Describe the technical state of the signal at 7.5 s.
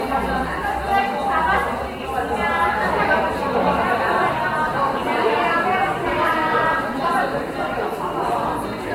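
At 7.5 s, as throughout, the sound is swirly, hollow and smeared, with blurred attacks and nothing above 16.6 kHz. This is likely generation loss from about four Vorbis passes near 62 kbit/s, worse than one encode at that rate.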